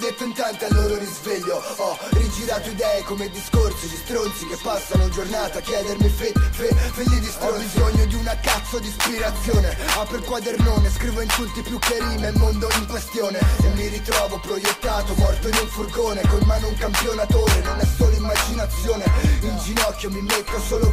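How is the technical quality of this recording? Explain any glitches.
No technical faults are audible.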